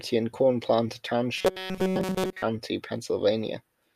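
Speech, with a stretch of robotic sound from repeated short buffers between 1.36 and 2.42 s. Over that span the voice becomes a hard, metallic buzz that tracks the words only loosely. The buzz sits at a fixed 188 Hz. That pitch fits a chunk of about 5.3 ms being played again and again. Nearly all of the segment is repeated material. The likely cause is audio arriving too slowly, with the player looping its last short buffer while real audio is dropped.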